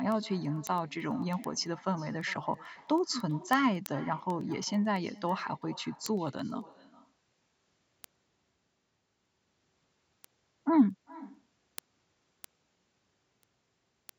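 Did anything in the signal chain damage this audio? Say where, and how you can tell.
Yes. Call processing let an echo through with no canceller: throughout the speech, a quieter, thinner copy, about 20 dB down, returns around 400 ms later. Unlike room reverb, it is a distinct delayed repeat rather than a smooth decay, meaning far-end loudspeaker pickup was never removed.

At the digital link into the converter, word clock ticks run from 0.12 s to 14.09 s, roughly every 0.1 s. Each is a single-sample slip, which fits unlocked clocks drifting around 200 ppm apart. Unlike buffer dropouts, there are no gaps, just sharp, evenly spaced ticks.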